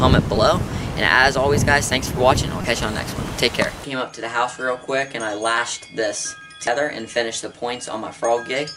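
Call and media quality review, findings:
Damaged data in a compressed stream: three short glitches, each about 36 ms, at 0.34–0.37 s, 2.61–2.64 s and 6.64–6.68 s. Decoder misreads corrupt frames and resyncs on the next header.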